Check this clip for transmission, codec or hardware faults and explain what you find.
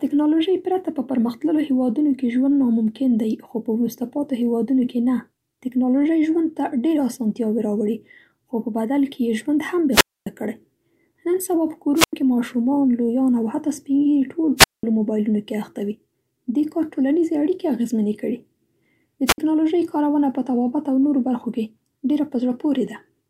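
The speech has a wireless microphone squelch dropout, heard four times. Events run 9.91 to 10.27 s, 11.95 to 12.13 s, 14.57 to 14.83 s, and 19.26 to 19.38 s. The muted holes last 258, 90, 197 and 58 ms. The analogue FM link weakens, and the receiver's squelch shuts the output. Each event brings a short surge of hiss or static, then near silence. Then the voice comes back.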